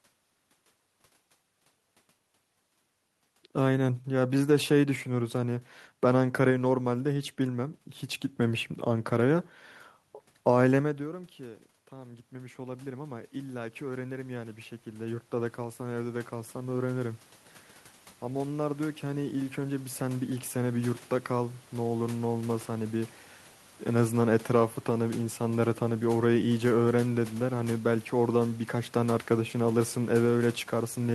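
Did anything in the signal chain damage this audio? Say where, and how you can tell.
Yes, automatic gain rising in call processing: after the talker backs off around 10.5 s, voice and room noise swell together, about 12 dB over 11.9–17.28 s, then about 6 dB more over 18.23–23.19 s.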